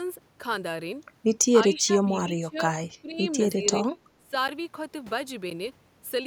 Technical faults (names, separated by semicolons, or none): speech suppressed in double talk; periodic USB or driver dropouts